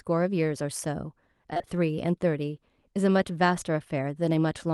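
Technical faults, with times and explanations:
1.53–1.69 s, repeated packet loss (robotic sound): over this short stretch of speech the stream drops out in quick succession, in about four brief holes, the longest around 22 ms. Each hole is bridged by stretching the last received sound forward before the next one arrives, so nearly half the span is patched rather than real. The repeated fill gives a choppy, robotic edge. Around it, the call path's codec caps the audio near 12 kHz.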